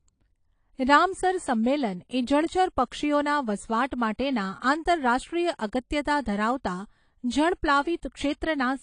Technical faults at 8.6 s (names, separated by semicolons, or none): AAC compression